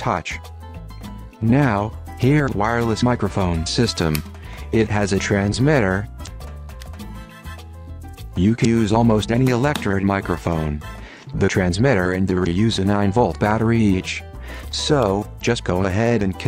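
Short chirps, squawks, clicks or holes, each about 40 to 50 ms long, interrupt the sound at 2.45–2.49, 6.23–6.28, 8.61–8.65, 12.42–12.47 and 15.38–15.43 s. These are damaged data in the compressed stream: the decoder misreads corrupted frames, loses sync and hunts for the next valid frame header.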